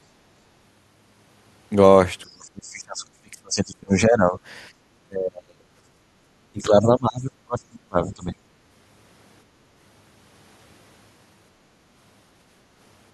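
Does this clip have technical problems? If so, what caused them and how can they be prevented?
Yes. From 2.23 to 4.38 s, 5.04 to 5.68 s and 6.52 to 8.37 s the speech sinks by roughly 30 dB or more. This is likely speech suppressed in double talk. The echo canceller couldn't separate the talker from loudspeaker echo. Better echo cancellation with double-talk detection prevents it.

At 4.71 to 4.76 s the background is gated by the echo canceller. The room sound drops about 11 dB for 50 ms while the loudspeaker plays. A gentler suppression setting stops this.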